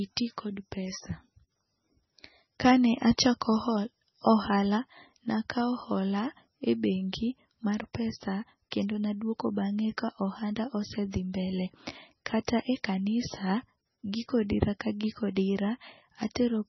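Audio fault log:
throughout: MP3 compression, likely cause; speech sounds watery and swirly, with nothing above 5.9 kHz, fitting a bitrate near 17 kbps starving the encoder.
12.47 s: pre-echo; about 16 ms of hiss precedes an attack, as quantisation noise spread across the block fills the quiet before it, softening the onset.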